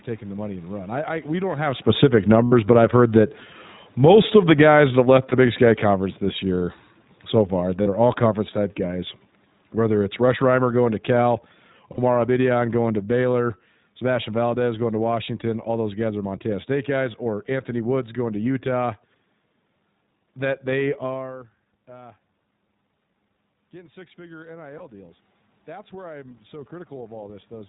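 A speech recording carried over the iLBC codec throughout, with plainly audible coding damage: a band-limited, slightly rough and synthetic voice with nothing above 4 kHz, so a spectrogram shows a hard ceiling there. The character fits the 15.2 kbps, 20 ms-frame mode. Just after "I we don't have", the automatic gain is falling from 1.88 to 15.28 s, pulling the level down by about 18 dB. Voice and background sink together, and the waveform envelope tapers steadily across those thirteen seconds. This is separate from the talker moved shifts near 1.5 s and 21 s and the steady room noise. Lost iLBC frames occur at 2.44–2.53 s (80 ms, which fits four frames), 5.30–5.34 s, 7.82–7.88 s, 11.92–11.99 s and 24.78–24.82 s. Each gap is filled with a held, faintly buzzy vowel built from the repeated last pitch cycle plus noise. It appears as flat, smeared harmonics on the spectrogram, and the voice recovers almost immediately afterwards.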